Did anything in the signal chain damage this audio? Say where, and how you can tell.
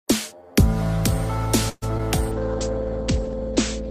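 Yes. From 1.69 to 1.84 s the sound stretches into a fading buzz, falls briefly silent, then resumes intact: a call audio freeze, likely a network stall draining the jitter buffer.

Between 1.98 and 2.01 s there is a quick smear where about 20 ms goes missing. This is short concealed packet loss: the decoder patched lost network packets by extending the preceding sound.

From 2.33 s to the end the audio turns rough and muffled, with highs capped near 8 kHz. This call bitrate drop came from the codec falling from 32 to 12 kbps.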